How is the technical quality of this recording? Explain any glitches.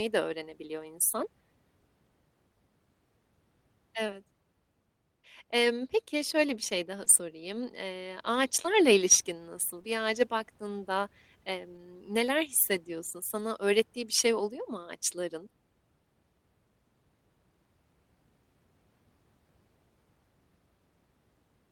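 The speech in this recording is marred by several packet-loss glitches of the kind heard on an internet call, all brief and each repaired by the receiver in some way.

Short concealed packet loss occurs at 1.09 to 1.13 s, just after "de öğrenebiliyor", and again at 4.07 to 4.10 s. In each case about 20 ms of audio failed to arrive, and the decoder filled the first 14 ms or so by extending the preceding sound before handing over to recovered data. The result is a quick smear or wobble. On a spectrogram the harmonics run flat and slightly blurred for that instant, and in the waveform the repeated cycles look suspiciously uniform.

Lost packets rebuilt from error correction cover the tail of both of those events, at 1.11 to 1.13 s and 4.08 to 4.10 s. The same fault appears at 11.73 to 11.79 s, just before "neler hissediyorsun", where the 40 ms fits two separate 20 ms packets, and again at 13.39 to 13.41 s. 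Each missing packet was restored from a low-bitrate backup copy carried in the following packet, so there is no gap. The reconstructed stretch is rougher and grainier. On a spectrogram the detail in those frames looks coarser and noisier than in the surrounding audio.

Scattered short gaps run from 7.04 to 9.85 s, starting after "şöyle bir şey daha". About three separate losses, none much longer than 15 ms, were patched by continuing the preceding sound, and some of the missing audio was recovered from backup copies. Only around 2% of that span is concealed. Each one sounds like a small hiccup, and on a spectrogram it shows as a thin vertical seam.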